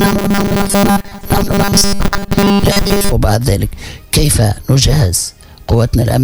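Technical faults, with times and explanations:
0.01 to 3.12 s, robotic sound from repeated short buffers: for roughly the first three seconds the sound collapses into a stiff, metallic buzz locked at 200 Hz. It still loosely follows the shape of the underlying audio, but it has no natural movement. The likely cause is new audio arriving too slowly, so playback fills the gaps by looping a tiny chunk over and over. A 200 Hz buzz fits a chunk of about 5 ms, and most of that stretch is repeats rather than fresh audio.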